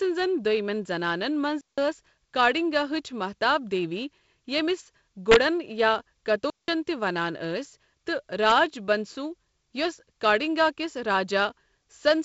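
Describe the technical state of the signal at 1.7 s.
A digital wireless dropout runs from 1.61 to 1.78 s, muting the signal for about 168 ms. When the radio link loses more data than it can recover, the receiver mutes its output behind a very brief fade rather than passing on corrupted audio. The result is a clean gap of near silence, with no crackle or noise burst on either edge, set within band-limited wideband telephone audio that stops near 7.7 kHz.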